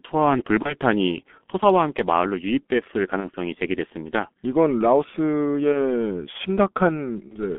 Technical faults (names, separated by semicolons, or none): G.723.1 codec; VoIP packet loss concealed by the speech codec